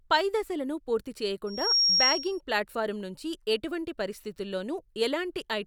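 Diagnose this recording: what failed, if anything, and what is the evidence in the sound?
Loudspeaker feedback squeal in the analogue path: a 5.6 kHz tone swells over roughly a third of a second from 1.46 s, sitting about 10 dB above the speech until 2.41 s, because mic-to-speaker loop gain exceeded unity.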